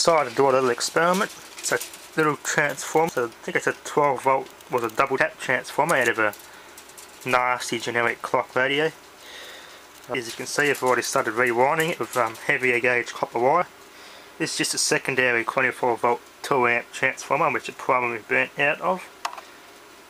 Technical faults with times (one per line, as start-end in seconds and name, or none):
1.65 compressed frames skipped
3.08 compressed frames skipped
5.17 compressed frames skipped
10.14 compressed frames skipped
13.61 compressed frames skipped
15.52 compressed frames skipped